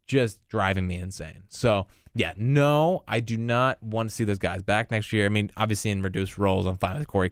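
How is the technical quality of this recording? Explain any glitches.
No glitches are audible; the speech holds steady throughout, with only the faint, light texture of Opus voice coding in its fullband hybrid mode.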